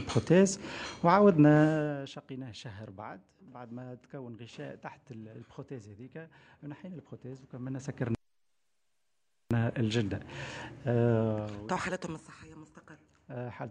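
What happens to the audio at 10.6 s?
Nothing goes wrong at 10.6 s: the audio carries on intact, with no dropout, glitch or abrupt jump in level.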